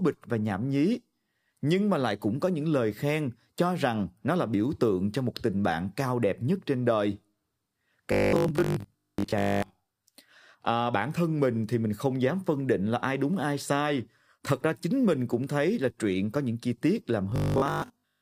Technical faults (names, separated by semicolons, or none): robotic sound from repeated short buffers